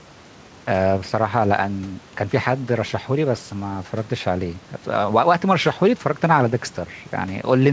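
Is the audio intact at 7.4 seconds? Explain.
Yes, the audio is intact at 7.4 seconds, with no dropout, glitch or other fault at that point.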